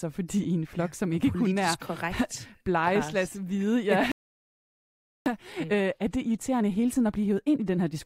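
At 4.12 s the player likely ran out of data or had its thread blocked, causing a playback stall: the speech cuts off mid-flow and stays silent for 1.14 s, until 5.26 s. From 5.26 s to the end, time-compressed catch-up trims the backlog by removing small slices and cross-fading the joins, so the speech runs 1.1 times fast at normal pitch.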